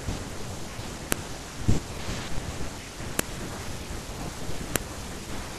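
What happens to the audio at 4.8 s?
At about 4.76 s, a second piece of audio was spliced onto the first without its WAV file header being stripped, so the header's few dozen bytes of metadata were read as sample values. That is the fault known as a file header played as audio. Because those bytes bear no relation to the waveform, they land as an abrupt burst lasting about a millisecond, heard as a sharp, loud click or snap at the join.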